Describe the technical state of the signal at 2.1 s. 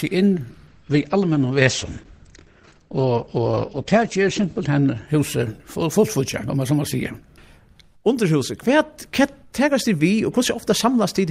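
At 2.1 s the signal sits inside a call bitrate drop running from 0.69 s to 5.13 s. The bandwidth estimate collapsed, so the encoder was forced to spend far fewer bits, and the sound points to a fall from around 48 kbps to about 11 kbps. Coding becomes coarse, giving a rough, watery texture, and the audio band narrows from 20 kHz to 8 kHz, leaving the top end dull and muffled.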